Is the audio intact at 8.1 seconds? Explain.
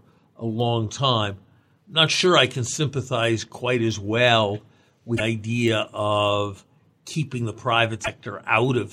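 No. Damaged data in the compressed stream hits from 8.01 to 8.08 s, right after "idea of keeping the". Corrupted bytes make the decoder misread those frames and lose sync while hunting for the next frame header. The result is a brief glitch.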